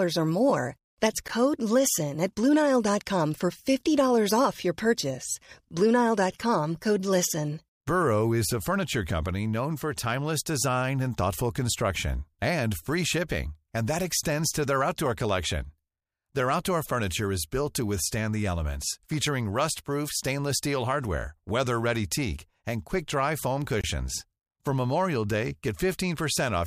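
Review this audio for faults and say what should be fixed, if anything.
Two gaps at a join of encoded pieces interrupt the speech: a 13 ms silence at 1.28 s and a 25 ms silence from 23.81 to 23.84 s. Each segment's encoder start delay and last-frame padding were left in. On the waveform each gap appears as a brief flat line with smeared edges. On a spectrogram it appears as a thin blank vertical stripe across all frequencies. To prevent it, trim the encoder delay and padding from each piece, or use gapless metadata, before joining.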